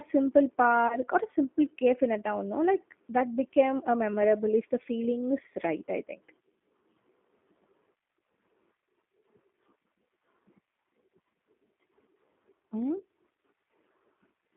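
The speech has passed through a G.729 codec, its sound pointing to roughly 8 kbit/s, limited to about 200 Hz to 3.6 kHz, giving plainly audible rough, synthetic coloration. At 0.88 to 0.97 s, VoIP packet loss concealed by the speech codec, likely one lost 20 ms packet, leaves a stretched, fading sound that stays weak or distorted briefly afterwards.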